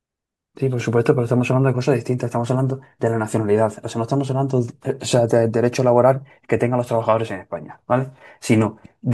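Speech recording with no technical faults detected anywhere in the clip.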